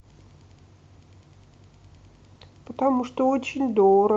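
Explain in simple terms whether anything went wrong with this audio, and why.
Nothing went wrong with this speech recording; the signal stays steady throughout, with no technical problems for a listener to notice.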